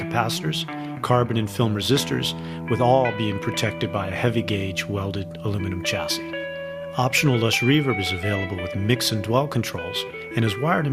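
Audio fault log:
No audio faults heard.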